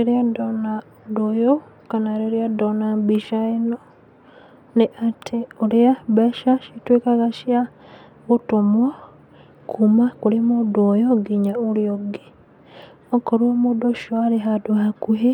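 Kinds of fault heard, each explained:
No fault can be heard in this speech clip. No working path is listed to describe, so there is nothing further to report.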